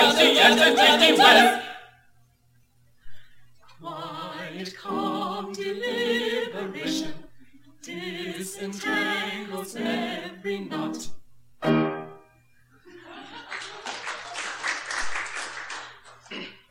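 From 0 to 11.70 s the audio carries a gritty, inharmonic fizz that rides on its louder and brighter moments, the mark of crude rate conversion. Samples were repeated to change the rate, most likely from 44.1 kHz to 48 kHz, with no filtering. The regular repeat pattern adds unrelated tones around 20 dB below the signal. A spectrogram shows faint mirrored streaks and haze beside the real partials, and the waveform shows tiny steps where samples are doubled.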